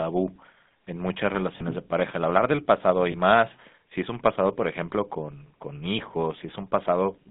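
Across the whole recording the speech carries the buzzy, gravelly texture of the GSM full-rate codec, plainly audible and consistent with a 13 kbps full-rate coder. The coder rebuilds each stretch from a vocal-tract filter excited by a coarse, regularly spaced pulse train, which roughens voiced sounds. A spectrogram shows energy confined to roughly 200 Hz to 3.6 kHz, with smeared, grainy harmonics instead of clean horizontal striations.

At 1.58 to 1.61 s, between "en muchas" and "de pareja", and again at 3.12 to 3.15 s, between "hablar del pasado y" and "más si es un", lost GSM frames occur. Each gap lasts about 20 ms, which fits a single dropped frame. The decoder repeats the previous frame's settings, producing a brief metallic ring. On a waveform these appear as short, repetitive segments, and on a spectrogram as frozen spectral stripes.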